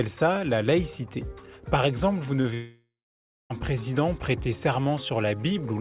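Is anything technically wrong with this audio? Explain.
Yes, there are two faults close together. From 2.42 to 2.46 s there's short concealed packet loss: a few hundredths of a second never arrived, so the decoder stretched the previous sound to cover it, leaving a quick smear. Then, from 2.54 to 3.52 s, the audio drops out for nearly a second. The last sound carries on as a fading buzz or hiss before settling into about half a second of silence, and the audio resumes with that stretch missing. That's likely a long network dropout where the receiver concealed what it could and then gave up. The whole clip tops out at 4 kHz, which fits a narrowband call codec like G.711 mu-law.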